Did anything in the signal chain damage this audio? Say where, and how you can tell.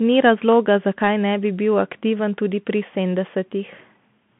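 Yes: a Bluetooth CVSD headset codec runs throughout, at the codec stage. Speech stops at 3.4 kHz, and one-bit step tracking leaves scratchy sibilants over granular hiss.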